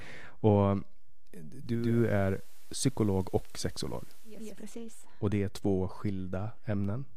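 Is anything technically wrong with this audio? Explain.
Yes, there are two problems, one running through the whole clip and one in the middle of the speech.

A DC offset is present from start to finish. The entire waveform has been shifted off zero by a constant amount, so on a waveform display the speech sits above or below the centre line rather than around it. It can't be heard as such, but it wastes headroom on one side. On a spectrogram it shows as a steady band of energy pinned at the very bottom, at 0 Hz, for the full length.

Between about 1.56 s and 4.68 s the audio shows digital radio blending to analogue. The receiver lost the digital stream and cross-faded, over roughly 481 ms, to the station's FM broadcast, then faded back. During that stretch hiss rises to around 30 dB under the speech, and the level shifts by about 1 dB. A spectrogram shows a raised noise floor filling the gaps between syllables across that span, with soft half-second transitions at each end.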